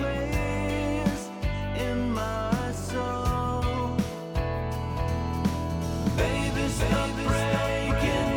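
From 4.90 s to the end, the audio carries a doubled audio track: a second, full-band copy of the same material runs roughly 0.7 s behind the original, around 5 dB quieter, with no decay or room colouring. It switches on abruptly rather than building up. On a waveform, every transient gains a smaller twin trailing it; a spectrogram shows each event repeated as a quieter, identical ghost offset in time. The likely cause is a second capture path or an edit leaving two out-of-step copies.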